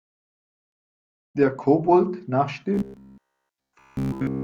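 From 2.74 s to the end at 4.43 s, the speech turns into robotic sound from repeated short buffers: a rigid, metallic 66.8 Hz buzz, likely from a roughly 15 ms slice being looped throughout. A spectrogram shows evenly spaced harmonic stripes; the waveform shows identical repeating cycles.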